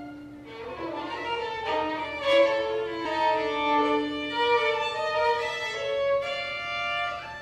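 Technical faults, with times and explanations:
3.04 s, damaged data in a compressed stream: a brief glitch of roughly 14 ms where corrupted bytes make the decoder misread a frame and resynchronise on the next header.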